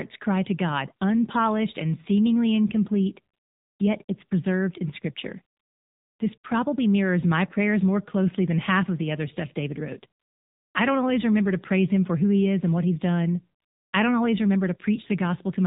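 Speech heard through the AMR narrowband mobile codec: nothing above 4 kHz survives, and the voice has a buzzy, synthetic edge, which points to a low mode around 7.4 kbps rather than a simple low-pass filter. AMR comfort noise replaces the pauses at 3.34–3.80 s, 4.04–4.08 s, 5.56–6.20 s, 6.38–6.44 s, 10.20–10.74 s and 13.60–13.92 s. A smooth, steady synthetic hiss switches in for the real background, so these gaps differ from dropouts, which would go silent.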